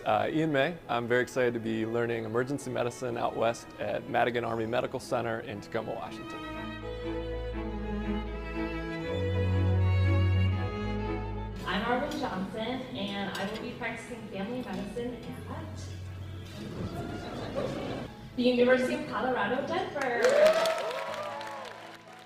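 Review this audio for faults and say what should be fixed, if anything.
From 0.0 to 10.68 s there is sample clock jitter: a fine hiss and roughness that swells on loud, bright passages and disappears in quiet moments. The converter clock wanders by a couple of microseconds, so each sample lands slightly off time, and the error, around 40 dB below the signal, scales with waveform slope. Clocking the converter from a low-jitter source or a properly recovered master clock prevents it.

Between 15.35 and 19.35 s the adaptive stream switches to a lower bitrate. Codec artefacts rise, then quality recovers abruptly with no gap. This fits a step down from roughly 64 to 16 kbit/s Opus when throughput dipped. Larger client buffering or a higher minimum bitrate floor prevents it.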